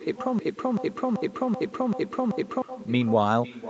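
Echo with no canceller runs through the whole clip: every stretch of speech is trailed, about half a second later, by a copy sitting about 13 dB below it, thinner than the original. The far end was playing the call over a loudspeaker, its microphone caught that playback, and nothing cancelled it, so the talker's own voice returned after the network round trip and overlaps whatever comes next.

A broken-record loop runs from 0.39 s to 2.62 s: a 0.38 s fragment of speech plays six times back to back, each repeat identical, before normal audio resumes. The likely cause is a stall in the player, encoder or stream, which kept resending the last fragment it held instead of new audio. Whatever should have been heard during those two seconds or so is missing, replaced entirely by the repeating slice.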